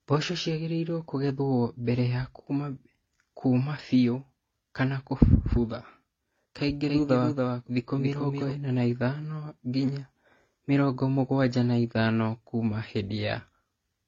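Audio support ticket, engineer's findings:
Throughout: smeared, swirly speech with a dull, band-limited top and metallic shimmer on sibilants. Two layers of artefacts at once. Likely transcoding between lossy codecs: a low-rate AAC pass re-encoded to HE-AAC, which kept the first pass's cut-off and added its own.

6.83–8.51 s: speech repeats behind itself, a dry full-band copy about a third of a second late and a few dB quieter, starting and stopping abruptly. Likely doubled audio track from a slower second capture path or an edit holding two copies.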